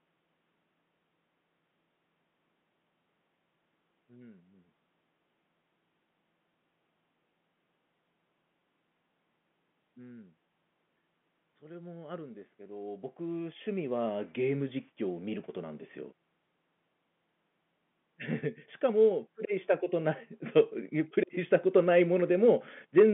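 No technical faults can be heard in this speech.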